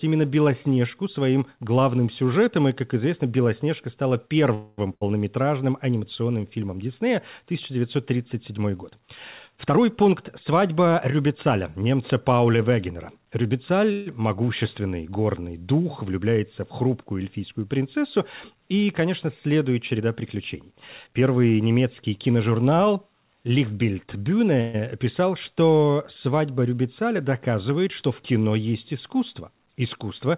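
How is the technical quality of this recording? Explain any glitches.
The recording has three kinds of glitch: brief freezes, one loss burst, and several speed-ups, all heard through a narrowband call path with nothing above 4 kHz, which fits G.711 A-law.

Call audio freezes at 4.54–4.80 s, 13.92–14.08 s and 24.61–24.76 s: a fading buzz or hiss fills the pause, likely from held-up packets draining the jitter buffer. The spectrogram shows smeared, static harmonics.

A burst of packet loss at 4.94–5.03 s drops about 80 ms. The last sound is stretched and faded, then speech jumps ahead. The waveform shows a decaying tail before an abrupt restart.

Jitter buffer speed-ups at 9.57–10.09 s (125%), 10.50–11.54 s (108%) and 19.99–21.58 s (108%) trim pitch periods, roughly a tenth of a second or more each. Speech sounds hurried at unchanged pitch, with compressed syllable spacing visible in the waveform.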